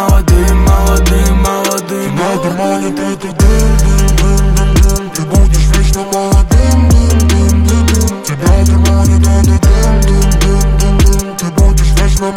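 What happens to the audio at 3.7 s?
Nothing goes wrong at 3.7 s; the audio carries on intact through that moment with no dropout, click or other fault.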